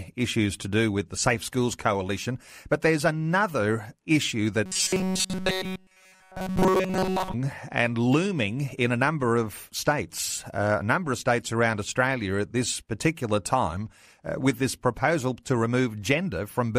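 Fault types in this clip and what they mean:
Robotic sound from repeated short buffers: after "there's another issue", from 4.66 to 7.34 s, the speech becomes a rigid metallic buzz fixed at 188 Hz. This is likely because audio arrives too seldom, so a stretch of about 5 ms is replayed continuously while new audio is skipped.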